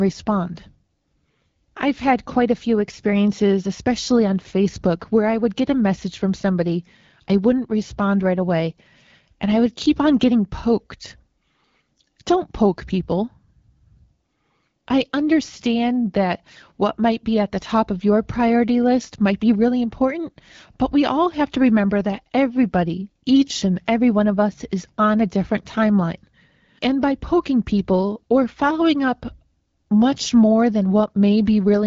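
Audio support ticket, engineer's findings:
No faults found.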